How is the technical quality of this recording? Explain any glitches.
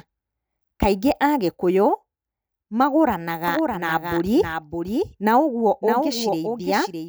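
The recording has one clear fault. From 3.48 s to the end, a doubled audio track appears: a full-band copy of the speech, about 5 dB quieter, trails roughly 0.7 s behind. The copy likely comes from a second, slower capture path. It kicks in abruptly, without decay or room colour. A spectrogram shows every pattern repeated about 0.7 s later and slightly fainter, and the waveform thickens.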